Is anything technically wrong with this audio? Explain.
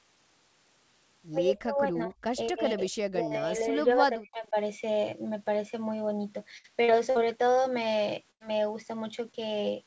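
Yes, there are four kinds of problem in this speech clip, all typical of a call path. The audio is band-limited to 8 kHz, which fits a G.722 call codec working as it should.

Speech suppressed in double talk shows up three times: 1.55 to 2.16 s, 2.49 to 2.91 s, and 3.1 to 4.56 s, the longest stretch. The likely cause is that both ends talked at once and the echo canceller couldn't tell the talker from the loudspeaker echo, so it clamped down on everything. The voice dips by around 20 dB, up to about 25 dB in the third stretch, and drops out in pieces. Roughly a second of the last span is affected.

Repeated packet loss (robotic sound) runs from 6.58 to 7.26 s. Four separate holes land close together, the longest about 60 ms, adding up to about 180 ms of lost audio. Each hole gets patched by stretching out the sound just before it, so about a quarter of that span is synthetic fill. It comes across as choppy, with bits of speech missing.

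A burst of packet loss hits from 8.31 to 8.42 s, where about 100 ms goes missing in one go. The receiver carries the last sound forward and fades it out across the gap, so you get a brief held buzz or fading hiss. Then speech picks up further along, and whatever fell in that gap is gone.

Short concealed packet loss appears between 9.32 and 9.49 s. Only about 20 ms failed to reach the decoder in time, and the gap was filled by extending the preceding sound before blending back into the real signal. It's just a small smear or wobble, and it adds about 15 ms of stretched timing. A quick consonant in there could easily get swallowed.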